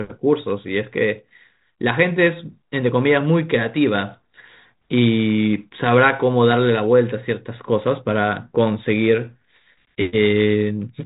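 No technical faults can be heard in the speech. It comes through a G.726 ADPCM path at 32 kbit/s, with nothing above 4 kHz and only light coding texture from the codec.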